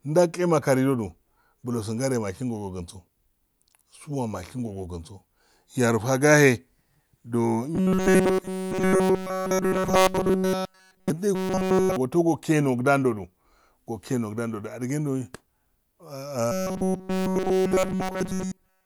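From 7.75 to 11.10 s, 11.35 to 11.96 s and 16.52 s to the end, speech turns into a rigid metallic 188 Hz buzz. This robotic sound likely comes from repeating a roughly 5.3 ms buffer.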